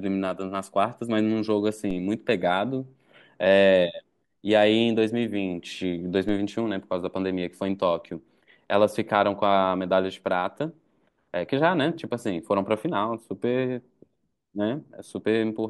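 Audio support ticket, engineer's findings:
DC step at 1.91 s and again at 6.29 s: low thump or click under otherwise continuous speech, each one an abrupt shift of the waveform's zero line of about -28 dBFS. Probable cause is a converter recalibrating or an offset input being switched in. The offset does not hold; a 5 Hz high-pass drains it in tens of milliseconds. On the waveform the baseline jumps and then curves back to center. On the spectrogram, a brief vertical broadband tick is concentrated at the lowest frequencies.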